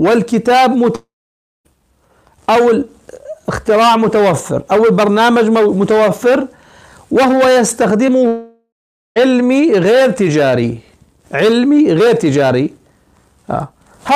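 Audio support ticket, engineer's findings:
Long network dropout, 0.95–1.67 s. About 0.7 s of audio lost. Receiver extends the last sound as a fading buzz, then about 0.57 s of silence, and audio resumes with the gap skipped. Likely a stalled network path upstream of the jitter buffer.

Long network dropout, 8.28–9.18 s. Same signature: about 0.88 s lost, fading fill, then about 0.44 s of silence before audio returns without the missing section.

Short concealed packet loss, 8.07–8.10 s. About 20 ms never reached the decoder in time. The decoder's loss concealment synthesises a continuation from the preceding sound and crossfades back into received audio, heard as a brief smear or wobble. It sits 0.2 s before the second dropout, which points to the same degraded network link.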